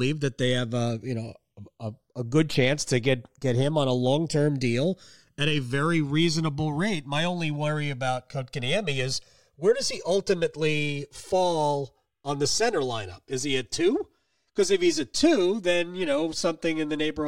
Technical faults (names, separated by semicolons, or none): channels drifting apart